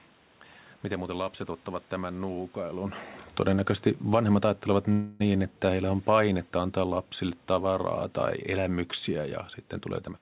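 Automatic gain falling sets in at 3.43 s, right after "lapset ottavat tämän nuukailun": the gain control judges the input too loud or its background too strong and eases its level down by about 5 dB until 7.96 s, just before "tai elämyksiä ja", so voice and background sink together. Inside that stretch, a call audio freeze runs from 4.92 to 5.22 s, likely from delayed packets draining the jitter buffer. The receiver stretches the last sound, fading, for 0.28 s, then resumes without losing anything. At the very end, from 10.07 to 10.21 s, a jitter buffer speed-up trims pitch-period slices, roughly a tenth of a second in all, so the speech rushes at 160% speed with unchanged pitch.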